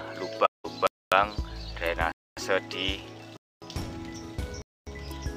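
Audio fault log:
0.45–0.66 s, AAC frame loss with muting: the sound fades out and then back in around a hole of about 190 ms. That length fits a run of roughly nine lost frames whose spectrum the decoder set to zero. The fades come from the overlapping transform windows, which taper the sound on both sides of the silence across about one frame. That soft edge sets it apart from the chunk gaps that follow. It occurs once and at no regular spacing.
0.87–1.12 s, 2.12–2.37 s, 3.37–3.62 s, 4.62–4.87 s, gap between chunks: four silences, each 250 ms long, break the audio after every 1.0 s of sound, so one starts every 1.25 s. The audio appears to have been delivered in one-second pieces, with dead air inserted at each join. Unlike the muted frames, these holes start and stop abruptly and return on a fixed rhythm.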